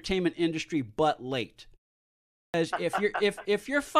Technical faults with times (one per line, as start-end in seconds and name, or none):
2.29-2.54 clipped start after a pause